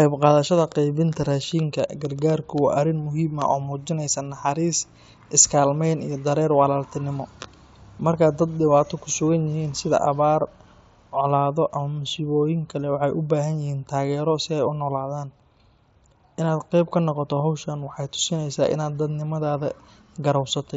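No technical faults are audible anywhere in the speech.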